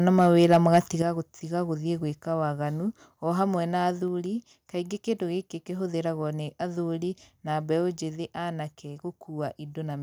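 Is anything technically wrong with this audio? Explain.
Yes, there are two problems close together near the start.

From 0.42 to 0.78 s there's microphone overload: the loudest peaks push about 4 dB past the converter's ceiling, so a small share of samples get their tops sheared flat. That gives those syllables a harsh, crackly edge, and the likely cause is input gain set too high.

Then at 1.02 s the microphone volume steps down. Voice and background both drop by about 8 dB at once, right after that distorted stretch, as if the call software caught the clipping and pulled the device's input level down in a single move.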